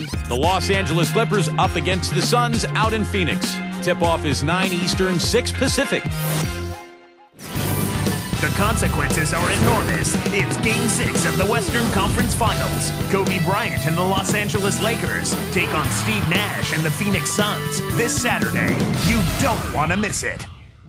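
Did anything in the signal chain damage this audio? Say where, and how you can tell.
No, nothing in the signal chain stood out as damaging this audio on listening.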